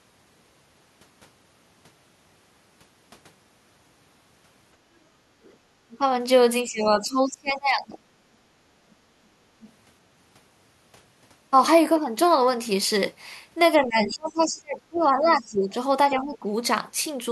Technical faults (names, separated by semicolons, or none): other side's voice leaking through; speech suppressed in double talk